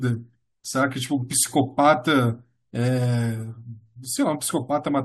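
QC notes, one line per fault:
No faults found in the speech. Nothing here needs a flag.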